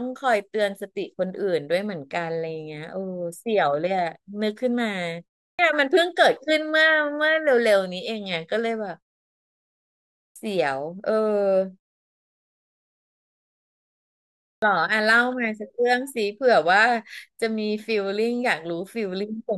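At 5.55, 10.32 and 14.58 s there's a clipped start after a pause: the output's still waking, so roughly 40 ms of each onset gets swallowed.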